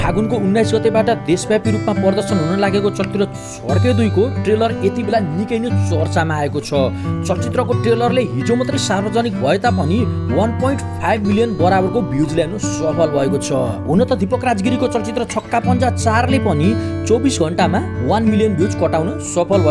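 Nothing here stands out as a technical problem; the audio just runs along without any hiccups to point to.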